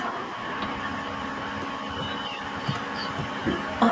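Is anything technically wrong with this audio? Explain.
Yes. From 0.0 to 0.07 s there is an echo leak: a brief, faint delayed copy of the speech, roughly 15 dB below it and trailing by about 1.08 s. The likely cause is a far-end loudspeaker whose echo canceller let part of the microphone pickup return.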